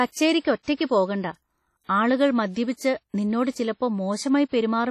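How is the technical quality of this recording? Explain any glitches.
The recording is heavily compressed throughout. A low-bitrate WMA compression pass, likely near 32 kbps, coded the speech in long transform blocks: it sounds washy and ringing, with hiss breathing alongside it, and nothing above 13.5 kHz.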